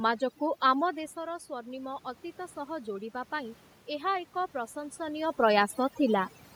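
Overdone noise removal runs through the whole clip. The noise reduction is set so hard that frequency bands sitting near its noise estimate are pushed almost to nothing, taking the quieter parts of the speech with them. The room noise collapses into near silence dotted with twinkling specks.

Automatic gain rising follows from 0.87 to 5.33 s. Around 1 s the talker moves away and the input drops by about 11 dB. The gain control responds by slowly raising its gain about 7 dB, so speech and the processed background swell up together over several seconds, until the talker moves again near 5 s.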